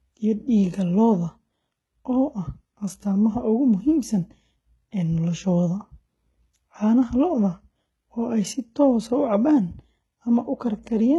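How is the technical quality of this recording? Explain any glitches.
The technical quality is poor. One fault runs through the whole recording. It is heavy damage from what is likely HE-AAC compression. The upper range has been rebuilt rather than kept. The codec stores the lower spectrum and fakes the treble by copying lower bands upward under a coarse envelope. Nothing remains above 11.8 kHz. The copied harmonics do not line up with the real ones. So the top end sounds false. S sounds come out gritty, metallic and lispy. The damage fits a very low bitrate, around 16 kbps.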